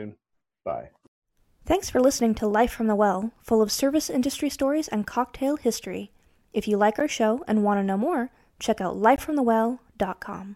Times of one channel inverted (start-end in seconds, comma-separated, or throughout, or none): none